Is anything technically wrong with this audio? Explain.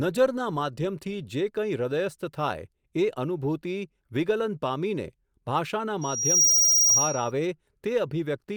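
Yes, there's loudspeaker feedback squeal from 6.01 to 7.31 s. The mic is hearing its own speaker, and the loop runs away at 5.7 kHz, so a piercing tone swells over about half a second to roughly 10 dB above the speech.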